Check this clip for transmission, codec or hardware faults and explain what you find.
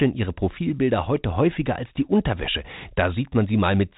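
No transmission, codec or hardware faults found; the speech carries the expected G.711 telephone coding, with nothing above 3.8 kHz, which is normal for that format rather than a defect.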